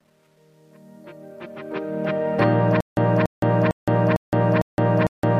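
From the start of the clip to about 2.44 s, the fade-in carries truncation distortion on a fade. The gain stage appears to drop the signal to roughly 10 bits without dither, so the quietest part, worst from 0.0 to 1.5 s, is rendered in a few coarse steps. It sounds gritty, and the grit tracks the level as the fade rises. Unlike a steady dither hiss, it fades as the level climbs.

From 2.81 s to the end there is a stutter with silent gaps. A fragment of about 286 ms plays, then about 166 ms of dead digital silence follows, and the same fragment returns every 453 ms, six times in all. Identical repeats separated by true silence are what set this apart from dropouts or a skipping loop without gaps. The likely cause is a stalled player or stream re-sending its last buffer on each retry, and the audio that should have followed is lost.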